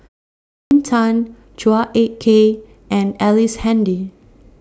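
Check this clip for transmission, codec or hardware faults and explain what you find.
One fault is audible in this speech clip.

Clipped start after a pause, 0.35 to 0.71 s: after the opening 0.35 s of silence, the output device has gone idle and needs time to wake, so about 0.36 s of speech is lost and the sound begins abruptly, missing its onset.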